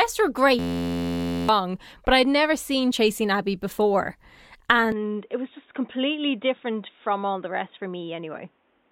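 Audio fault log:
0.59–1.49 s, system hang loop: a single slice of sound 11.61 ms long repeats exactly for nearly a second, so instead of speech there is a steady, harsh buzz at 86.1 Hz, the loop rate. The driver stalled while the hardware kept replaying the same ring buffer, which fits a 512-sample buffer. About a second of real audio is lost. On a waveform, an identical cycle tiles across the span. On a spectrogram, evenly spaced horizontal harmonic lines at multiples of 86.1 Hz replace the normal speech pattern.
4.92 s to end, input switched to a poorer device: from 4.92 s the speech turns dull and boxy, with nothing above 3.8 kHz. It drops about 5 dB in level and gains a new background noise roughly 40 dB below the speech, with no silence at the change. The likely cause is the recording input jumping to a narrower-band microphone or a headset call profile. A spectrogram shows a hard ceiling at 3.8 kHz and a raised noise floor from that point. 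The waveform envelope steps down slightly.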